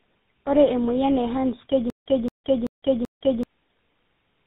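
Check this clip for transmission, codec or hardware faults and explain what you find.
Two faults are audible in this speech clip.

Tandem speech coding runs throughout. The sound suggests GSM full rate at both ends, with G.711 mu-law and CVSD stages between. Each speech coder re-encodes the previous one's damage. Speech is rough, muffled and warbly, with nothing above 3.8 kHz.

A stutter with silent gaps runs from 1.90 to 3.43 s. A 225 ms burst repeats four times, each followed by 158 ms of digital silence, at a 383 ms period. The likely cause is a stalled stream replaying its last fragment. The audio from that stretch is lost.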